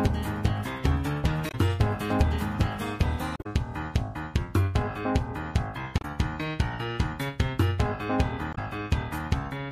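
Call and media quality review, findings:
Damaged data in compressed stream: short glitches (chirp, squawk, click or brief hole) at 1.48–1.55 s, 3.36–3.46 s, 5.98–6.05 s, 8.51–8.58 s (about 70–110 ms each). Decoder misreads corrupt frames, loses sync, resyncs at next header. Spectrogram: broadband vertical smears; waveform: abrupt discontinuities.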